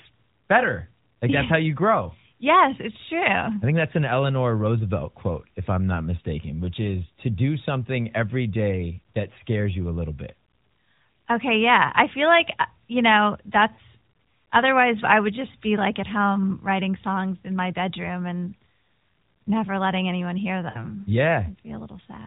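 Lost AMR speech frames: radio errors corrupted about 40 ms of data, which fits two 20 ms frames, at 13.74 s after "like uh you know" and again at 20.70 s after "never letting anyone hear". The decoder repeats the last pitch with fading gain, so the speech briefly smears and dips before recovering roughly.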